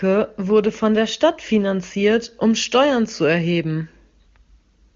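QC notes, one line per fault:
No faults heard.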